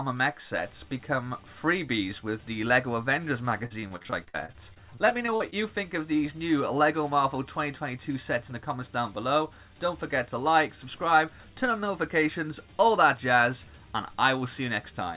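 Between 3.66 and 5.54 s the audio breaks up into repeated packet loss, giving the familiar robotic sound: a rapid run of short dropouts, the longest about 52 ms, each bridged by extending the preceding sound before the next hole arrives. Roughly a fifth of that stretch is concealment rather than real signal, so the passage turns choppy with fragments missing. The band-limited call path, with nothing above 4 kHz, fits G.711 A-law at 64 kbps.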